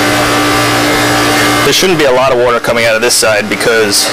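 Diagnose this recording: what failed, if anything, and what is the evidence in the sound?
Hard clipping at the converter or gain stage throughout: about 18 dB of overdrive flattens nearly a third of the waveform, producing harsh fuzz on every loud passage.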